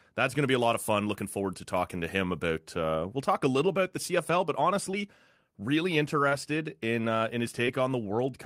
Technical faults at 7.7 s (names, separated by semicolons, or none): short concealed packet loss